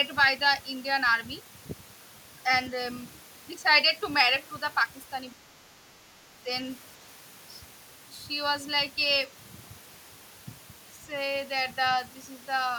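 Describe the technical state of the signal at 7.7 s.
At 7.7 s the speech signal is intact, with no audible fault at that moment.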